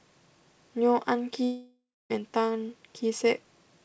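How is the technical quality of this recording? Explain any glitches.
There is one clear glitch, heard through a call path whose sound stops at 8 kHz. From 1.44 s to 2.12 s, a long network dropout likely cut the stream. About 0.66 s of audio never arrived, so the receiver stretched the last sound into a fading buzz. That left roughly 0.26 s of near silence before the speech resumed, with the lost part simply gone.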